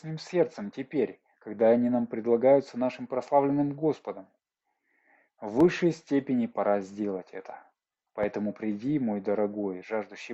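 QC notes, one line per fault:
5.60–5.63 s and 8.23–8.26 s, loud pops: two single sharp pops, each a couple of hundredths of a second long and peaking around 10 dB above the surrounding sound, which keeps going underneath both. That sudden, hard-edged thump is the signature of a step or spike of voltage landing in the signal path, likely a plug being disturbed, a switch, or a static discharge, with the following circuitry shaping it into a brief pulse.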